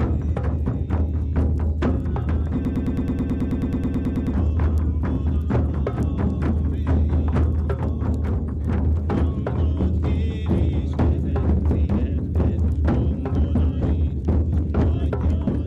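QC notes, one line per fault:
2.65–4.34 s, broken-record loop: a 108 ms fragment repeats exactly 16 times, likely from a stalled player resending its last buffer, so the intervening audio is lost.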